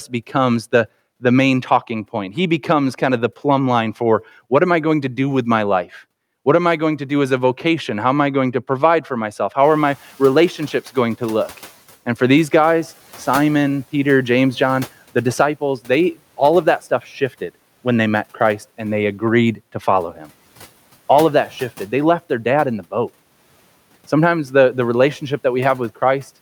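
A noise suppressor catching up is the fault in this speech recording. Just after "to provide for myself", at around 9.5 s, the room noise jumps by about 20 dB. The suppressor's noise estimate lags behind that step, so from 9.63 to 11.78 s the louder background passes with too little reduction. Over those 2.15 s it is pulled down, by about 8 dB, from a level after the rise of about 27 dB below the talker.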